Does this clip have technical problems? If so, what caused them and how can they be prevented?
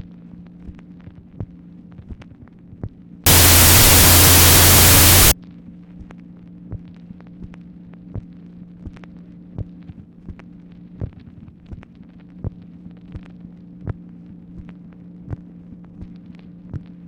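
Yes. From 3.26 to 5.32 s there is a wrong sample width fault. Loud noise swamps the sound, and the original is buried inside it. It runs at half speed, an octave low. This fits 32-bit float data read as 16-bit integers. Each float is split into two integer values. Only the half carrying the top bits keeps any trace of the signal, and doubling the value count halves the speed. To prevent it, make sure the reader uses the same sample format the file header declares.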